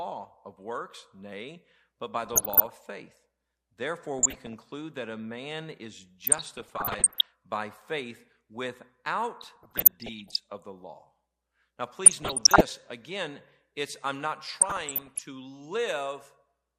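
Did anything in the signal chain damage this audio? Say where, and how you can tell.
Yes. DAB burbling at 2.24–2.73, 4.19–4.59, 6.27–7.27, 9.41–10.40, 12.05–12.61 and 14.56–15.22 s, from weak broadcast reception. Bit errors of about 0.5 to 1 percent escaped error correction into the MP2 data, so corrupted samples put short noise blips in single sub-bands and corrupted scale factors made sub-bands jump in level for up to a frame, giving blips and level jumps over the speech.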